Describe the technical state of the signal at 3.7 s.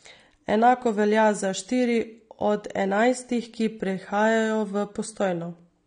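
At 3.7 s the speech sounds dull and smeared, with a fizzy, warbling edge on sibilants and nothing above 9.7 kHz. That is AAC compression, present throughout the clip. It's likely an AAC-LC encode at a low bitrate, consistent with around 32 kbps, where coarse quantisation and a lowered cut-off leave the spectrum thin.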